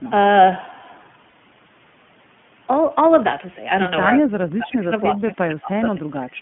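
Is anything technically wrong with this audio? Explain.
Yes, there are three problems. The iLBC codec runs throughout: this speech is confined to roughly 150 Hz to 3.4 kHz and sounds rough and slightly synthetic, which fits iLBC's 15.2 kbps, 20 ms-frame mode. Unlike an ordinary low-pass, the codec adds this grainy texture.

From 1.30 to 1.34 s, lost iLBC frames leave a 40 ms gap. The decoder filled it by repeating the last pitch cycle with noise, so it sounds like a brief buzzy held vowel rather than silence. The voice recovers instantly because each frame stands alone.

From 4.18 to 6.11 s, the speech drops in and out by up to about 20 dB, around a second and a half in total. This is likely speech suppressed in double talk, with the echo canceller ducking the talker while the far side speaks.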